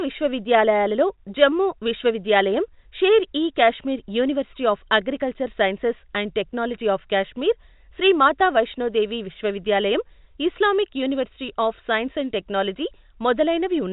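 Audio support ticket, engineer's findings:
No faults found; the speech comes through the WebRTC call path as expected, with the spectrum stopping at 4 kHz in a way that fits G.711 mu-law telephone-band coding.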